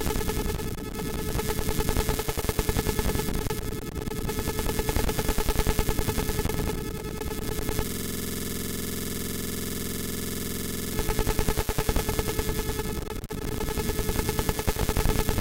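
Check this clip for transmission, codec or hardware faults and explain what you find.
One hardware fault is present, a system hang loop. From 7.87 to 10.93 s the sound freezes into a rapid, rattling buzz at about 21.5 Hz. The host stalled while the audio device kept replaying one 46.44 ms ring-buffer segment, which fits a 2048-sample buffer.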